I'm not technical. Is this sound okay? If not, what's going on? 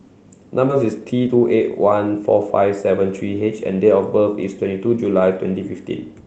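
No. At about 0.7 seconds the speech suddenly jumps forward, as if a small piece was snipped out and the two ends glued together. Roughly 0.4 seconds of speech is missing, with no pause or filler where it should be. This is a skip ahead: the audio arrived over the network with delays, and the receiving side (the jitter buffer, which holds incoming audio briefly to smooth out delays) had a backlog of audio waiting, so it dropped a stretch and carried on from the newer audio.

Right after that, from about 0.83 to 2.82 seconds, the speech runs slightly fast, about 9 percent quicker than normal. It can sound a little hurried, but the pitch doesn't rise. This is a jitter buffer speed-up: the receiver was still holding more audio than it wanted, so it trimmed many tiny slivers, each far too short to hear alone, adding up to about a fifth of a second. That catches playback up so the conversation doesn't lag behind.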